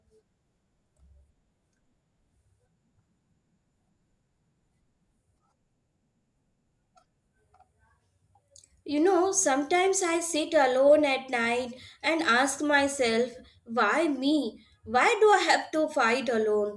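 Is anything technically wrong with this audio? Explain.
No, no technical faults here.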